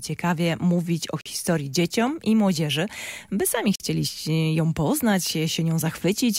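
The audio was delivered in chunks about 2.5 s long, and instead of running back to back, each join leaves a stretch of silence, a gap between chunks of 44 ms. Nothing is lost, but the flow breaks off abruptly: hard-edged holes appear from 1.21 to 1.26 s and from 3.76 to 3.80 s, spaced evenly at the chunk interval, which points to padding or a late start at each chunk boundary.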